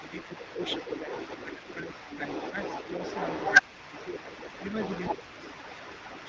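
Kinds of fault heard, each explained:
speech suppressed in double talk: When both ends talk at once, the echo canceller likely mistakes the near voice for loudspeaker echo and pulls the level down. Brief dips of roughly 5 to 10 dB, lasting under a quarter second each, come at 0.0, 1.54, 2.0, 3.62, 4.19 and 5.15 s. They show as short notches in the waveform envelope and as faded bands across the spectrogram.
other side's voice leaking through: A second voice runs under the talker for the whole clip, about as loud as the main speech. The loudspeaker sound likely reached the microphone and the echo canceller did not remove it. On a spectrogram two sets of harmonics overlap, with continuous energy filling the pauses in the waveform.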